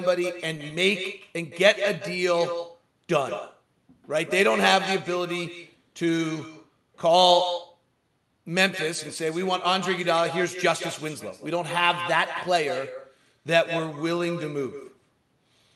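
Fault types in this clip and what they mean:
Echo with no canceller: The speech is followed by its own copy, delayed by roughly 150 ms. It comes back around the call loop. The far end plays the audio on a loudspeaker, its microphone picks it up, and nothing strips it out. The copy sits about 10 dB below the direct speech. It sounds thinner, like a slapback shadow behind every syllable. It lasts the whole clip, over a call codec band-limited near 12 kHz.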